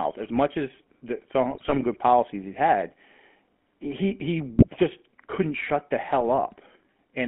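A speech recording carried through the GSM full-rate codec for its whole length. The encoder models the vocal tract and excites it with a sparse, regularly spaced pulse train, discarding most of the excitation detail. The result is the plainly audible buzzy, gravelly grain of early mobile calls, consistent with the 13 kbps full-rate coder. The band runs from about 200 Hz to 3.4 kHz, so the top end is dull and the lowest fundamentals are thinned. On top of this are three bursts of GSM bit errors, where corrupted bits reached the decoder and scrambled filter, pitch and gain values for a run of frames. The longest, from 1.51 to 1.79 s, falls between "much as the" and "good policies he had", and its errors, around 2% of bits, turn the sound into gargling squawks. Shorter breaks follow at 4.57 to 4.67 s, just before "just couldn't shut the", and at 6.18 to 6.23 s, right after "just couldn't shut the", each a brief pop or squawk where a few frames decode wrongly.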